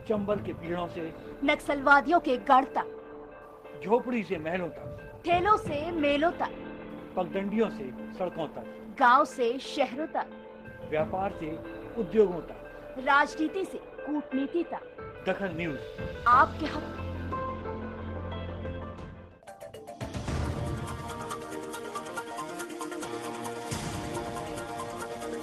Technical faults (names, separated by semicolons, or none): none